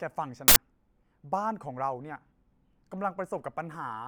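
A buffer played before any audio was written, an uninitialised buffer, inserts an 80 ms burst of loud digital noise into this speech clip from 0.48 to 0.56 s.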